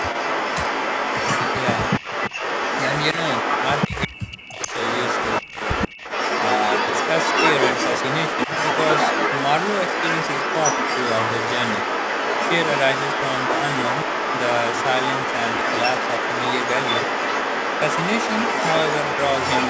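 All the way through, the speech is gritty, with grain that tracks the signal at only about 10 dB down. That sounds like low bit depth without dither, most likely 5-bit rounding. From the start to 4.07 s, a copy of the speech trails by 133 ms at roughly the same loudness. That's echo leak, likely from a loudspeaker echo canceller letting it through. From 3.87 to 4.72 s, the speech drops out in pieces, as deep as about 40 dB, over roughly 0.7 s, which is likely speech suppressed in double talk. The echo leak returns at 4.6 s and runs to the end, again 133 ms behind. Another suppression dip of about 35 dB hits between 5.42 and 5.61 s. The band tops out at 8 kHz, which is normal for the call microphone processing.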